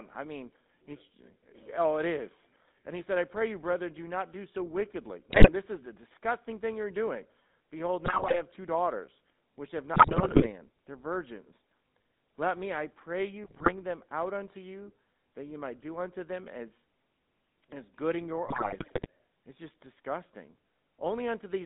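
Throughout, the speech passes through the GSM full-rate codec. It rebuilds each stretch from a vocal-tract filter fed by a sparse train of pulses, and that coarse excitation leaves a plainly audible buzzy, gravelly grain on every syllable. The band is held between about 150 Hz and 3.7 kHz, so the speech sounds thin and boxed-in. The grain and the narrow band point to a low-bitrate cellular link of around 13 kbps.

GSM bit errors then strike in five bursts, at 5.3 to 5.5 s, 8.06 to 8.42 s, 9.94 to 10.5 s, 13.44 to 13.73 s and 18.46 to 19.06 s. Corrupted bits reach the decoder and scramble its filter, pitch and gain parameters frame by frame. In each burst the spectrum warps or the level jumps unpredictably, so the speech breaks into squawks, pops and wet gargling. The longer bursts near 10 s and 18.5 s hit 26 and 29 frames.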